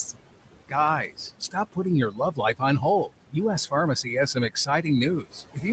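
Noise suppressor artifacts run through the whole speech clip: the suppressor pulls the room noise, which sits about 14 dB below the speech, down by about 17 dB between phrases, so the background pumps as gain swings frame by frame.

Speech cut by the noise suppressor occurs at 1.09–1.77 s, 2.11–2.61 s, 4.03–4.85 s and 5.23–5.64 s. Each time, the suppressor mistook quiet speech for noise and dipped it by about 17, 15, 11 and 14 dB respectively, so roughly a tenth of a second or more of soft consonants or endings sounds swallowed.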